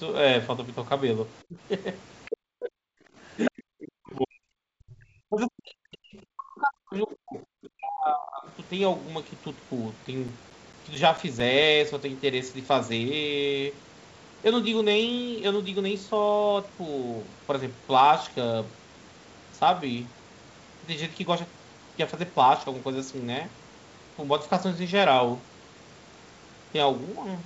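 The echo canceller likely mistook overlapping talk for echo and pulled the speech down, so it dips by about 25 dB from 1.48 to 1.57 s, the speech suppressed in double talk. At 2.25 s the other side's voice leaks through, a scrap of likely residual echo about 25 dB under the speech. From 2.29 to 2.72 s suppression returns, the speech sinking by about 40 dB. From 3.0 to 3.17 s the canceller clamps the microphone while the loudspeaker plays, and the background is gated, the room sound falling by 14 dB for a moment before returning. At 3.45 s the far voice leaks again, louder this time at about 10 dB below the speech. Long stretches of speech are suppressed in double talk from 3.49 to 5.08 s and from 5.27 to 8.47 s, cutting in and out by up to about 40 dB. Between 9.83 and 11.62 s, uncorrectable damage on a scratched CD recurs with each rotation, producing nine CD scratch ticks, each a very short click or dropout at a steady rhythm.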